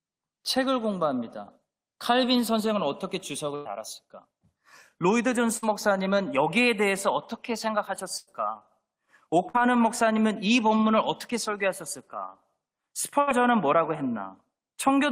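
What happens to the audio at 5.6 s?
A burst of packet loss hits from 5.57 to 5.64 s. Several consecutive packets never arrived in time, so the receiver papered over the hole by stretching the last sound it had, holding it for about 52 ms while lowering its level, which gives a brief held buzz or fading hiss in place of real audio. When the stream picks up again, about 60 ms of the speech has simply vanished, leaving a small jump forward.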